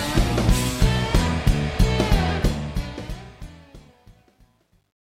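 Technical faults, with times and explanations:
2.29–5.05 s, truncation distortion on a fade: as the fade-out that begins around 2.3 s drops toward silence, the gain stage rounds each sample to a coarse grid with no dither, which fits an effective depth of about 11 bits. The low-level waveform collapses into a few square steps, so the tail turns gritty instead of thinning out cleanly. From 3.69 s to the end it is at its worst.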